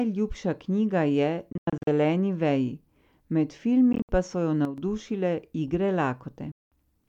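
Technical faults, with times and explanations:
1.52–1.87 s, 3.93–4.09 s and 6.52–6.72 s, Bluetooth dropout: the sound cuts to silence and resumes further along, as if it had kept playing, likely because packets reached the headphones too late and were discarded. The first hole is broken up, about 227 ms missing across 0.35 s with a longest gap of 93 ms. The second loses about 107 ms across 0.16 s. The third is one solid 200 ms gap. Unlike a level drop, nothing at all is heard in the gaps.
4.65–4.78 s, sudden gain jump: just after "so jo" the level steps down by about 9 dB in an instant, holds for 0.13 s, then steps back. The likely cause is a digital gain change applied between one sample and the next with no ramp. The sound never vanishes, and the background noise falls and rises with it, which separates this step from a dropout or a fade.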